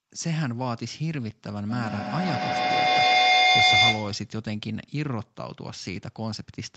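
A speech recording in which, from 1.69 s to 4.35 s, a feedback echo between two devices takes hold: each syllable returns roughly every 150 ms, thinner and more ringing on each pass. The repeats build rather than decay, peaking about 9 dB above the speech itself. Two devices on the same call share a room, so one device's microphone picks up the other's loudspeaker, and neither echo canceller can remove sound it did not play.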